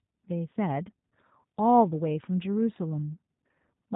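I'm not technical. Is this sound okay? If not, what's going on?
No. The speech went through the G.729 codec, a very compact telephone-style codec built for internet calls. Instead of sending the actual sound, it sends a rough description of the speaker's throat shape and pitch, and the receiving end rebuilds the voice from that. Everything above about 3.8 kHz is thrown away. The result, plainly audible for the whole clip, is muffled, slightly rough, synthetic-sounding speech that stays understandable.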